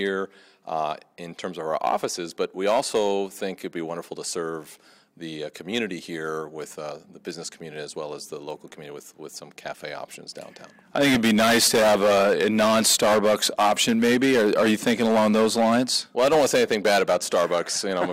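Word clock ticks: an unsynchronised digital receiver slips one sample about every 0.7 s, leaving around twenty sharp, uneven ticks from 0.29 to 17.4 s.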